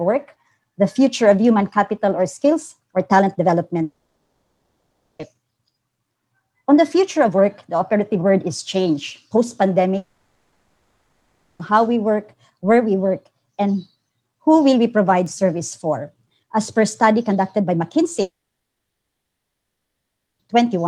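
At 3.83 s the sound breaks off until 5.21 s: a brief fading buzz, then about 1.25 s of silence before the audio resumes further on, with that stretch missing. The same happens from 9.97 to 11.61 s, where the smeared tail holds longer and only the last half second goes quiet, and again from 18.21 to 20.41 s, almost all of it silent. This is a long network dropout, likely from packets that never arrived. The receiver stretched the last sound and then gave up. A spectrogram shows blurred, fading bands, then a blank gap. The waveform decays into a flat line.

At 15.26 s a single sharp tick cuts through the audio. This is a bit error spike: one sample had a bit flipped, so its value leapt by a power of two and snapped back at the next sample. The waveform shows a lone one-sample spike standing out from the surrounding signal. The spectrogram shows a thin vertical line spanning the whole frequency range, with no relation to the sound around it.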